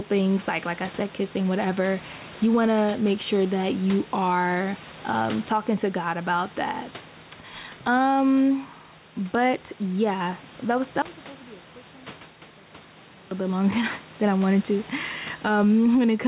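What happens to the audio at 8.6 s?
Gain pumping is present at 8.6 s, as it is through the whole clip. The input gain is likely set far too high, so a fast limiter clamps each loud stretch of speech. The gain swings by around 10 dB, squashing the dynamics.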